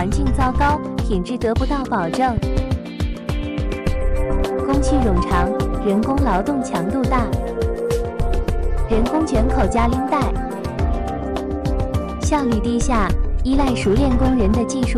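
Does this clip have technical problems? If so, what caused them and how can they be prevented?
Yes. There is a loud pop at 2.37 s, heard as two sharp pops in quick succession ending by 2.60 s, reaching roughly 10 dB above the surrounding level while the sound continues underneath. This is likely a sudden voltage step or pulse entering the signal path, such as a connector being plugged in, a switch operating, a static discharge or a driver glitch, which the downstream circuitry shaped into a brief transient. Secure connections, switch sources with the channel muted, and control static near the equipment.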